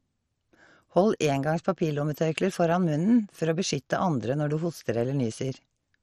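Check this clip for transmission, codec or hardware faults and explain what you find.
One codec fault runs through the whole clip.

MP2 compression, throughout: the speech has nothing above 13.2 kHz and carries heavy coding damage, likely from MPEG Layer II at a rate that fits about 56 kbps. The coder divides the signal into 32 equal sub-bands and shares out too few bits, so the top bands are dropped and the remaining ones are quantised coarsely. The result sounds dull, with a gurgling, grainy roughness as bands flicker in and out.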